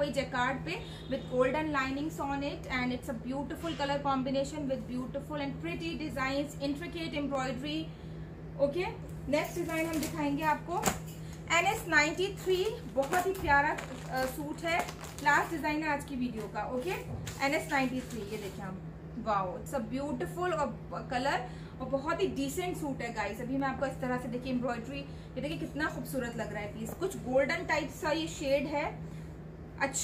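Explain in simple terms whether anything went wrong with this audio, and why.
Three single sharp clicks stand out, at 7.35, 23.6 and 25.52 seconds. Each is most likely caused by dropped samples: a tiny slice of audio, a fraction of a millisecond, went missing, so the waveform jumps abruptly instead of flowing smoothly.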